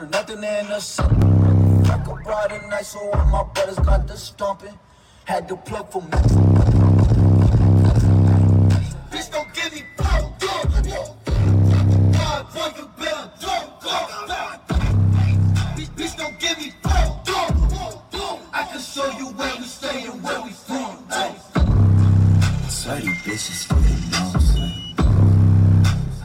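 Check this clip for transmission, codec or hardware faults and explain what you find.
One fault stands out. At 1.22 s there is a small jump in the sound. It is likely a dropped buffer (overrun). Samples were overwritten before being read, so roughly a millisecond or two vanished. The two sides butt together without silence.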